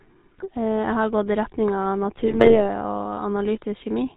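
The whole clip has passed through the GSM full-rate codec. The coder keeps a vocal-tract filter and a sparse pulse excitation, retaining only one excitation sample in three, which fits the 13 kbps full-rate scheme. Everything above 4 kHz is gone, and the crude pulse model leaves a plainly audible buzzy, gravelly roughness on the speech from start to finish, with a dull, band-limited top end.

Between 0.32 and 0.48 s, GSM bit errors corrupt the data reaching the decoder. Flipped bits in the filter, pitch and gain parameters throw the spectrum and level off for each damaged frame, producing squawks, pops and a gargling break in the speech. Six frames are corrupted in this stretch. A longer burst from 2.21 to 2.61 s, with eleven damaged frames and an error rate near 2%, gives a sustained stretch of the same garbled squawking.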